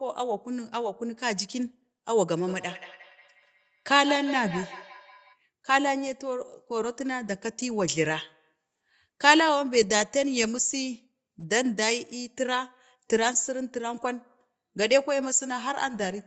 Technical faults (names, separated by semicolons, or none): feedback echo between two devices